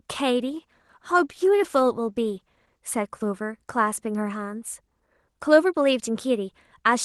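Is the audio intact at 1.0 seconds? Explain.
No. At 1.0 s the speech sits inside a call bitrate drop that runs from 0.41 s to 2.86 s. The rougher, watery texture points to the Opus encoder being squeezed from around 32 kbps down to about 18 kbps, coding each frame more coarsely until the rate recovers. Packet loss leaves gaps or robotic glitches. This fault stays continuous, and the degraded texture holds steadily for about 2.4 s before clearing.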